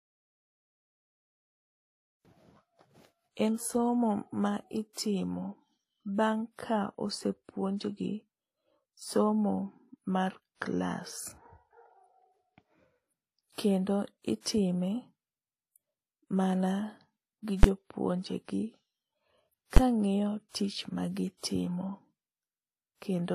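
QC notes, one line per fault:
Throughout: transcoding between lossy codecs. The speech has stacked codec artefacts heard together with nothing above 14.9 kHz, likely a low-rate HE-AAC pass later re-encoded as WMA.
17.63 s and 19.77 s: invalid numbers at full scale. Each is a single loud bang, roughly 10.7 ms pinned flat at one extreme value, which fits a 512-sample block of bad values.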